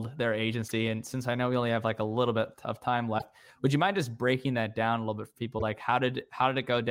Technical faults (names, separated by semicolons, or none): damaged data in a compressed stream